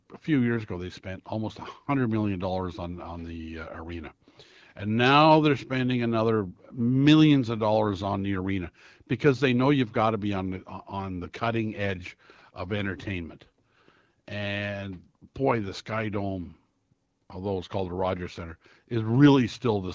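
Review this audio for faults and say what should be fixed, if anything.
No faults found; nothing needs fixing.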